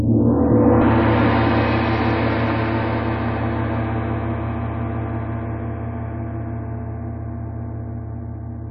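Damaged data in a compressed stream shows up at 0.80 s as a brief glitch, over in a fraction of a blink. Some of the encoded stream at that point is wrong, so the decoder cannot make sense of the frame it is reading. It produces a brief chirp, click or gap, loses its place in the stream, and then locks back on at the next valid frame header.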